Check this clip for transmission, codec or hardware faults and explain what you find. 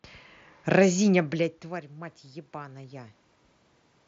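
One fault turns up: automatic gain rising. From 1.13 s to 3.1 s the speech and the room noise swell up together, gaining about 5 dB over roughly two seconds. The level had dropped by about 20 dB when the talker moved back near 1.0 s, so the gain control slowly pushed its gain up to compensate. Background and voice lift as one, with the noise floor audibly creeping up. The audio stops at 7.8 kHz with a light graininess on loud sounds, consistent with the mSBC Bluetooth headset codec.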